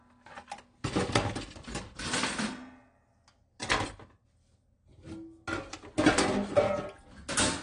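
Throughout, the sound is dull and smeared. Nothing reaches above 10.1 kHz. Sustained parts warble and fizz, and the damage is plainly audible. The likely cause is AAC compression at a low bitrate, around 32 kbps, with the cut-off pulled down.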